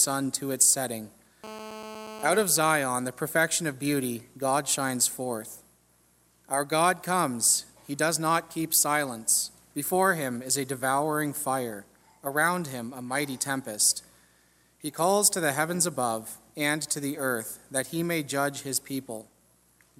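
GSM phone buzz runs from 1.44 s to 2.43 s, about one second of hard, raspy buzzing sitting roughly 13 dB below the wanted sound. A nearby 2G handset on a call was keying its transmitter in bursts 216.7 times per second, and the audio circuitry rectified those radio pulses into a 217 Hz tone rich in harmonics. Because the phone was in a call, the buzz holds steady throughout, with no connection to the programme material.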